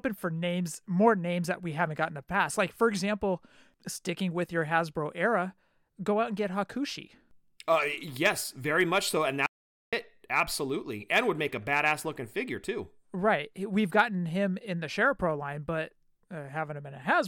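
The input was likely lost, through a dropped link or stray mute, while the recorder kept writing silence. This audio dropout to silence runs from 9.46 to 9.93 s. The speech cuts off abruptly into 0.46 s of total silence, with no room tone, then resumes mid-flow.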